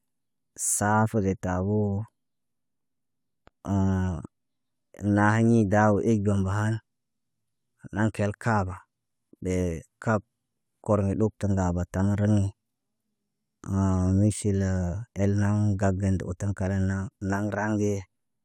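No technical faults can be heard anywhere in the speech.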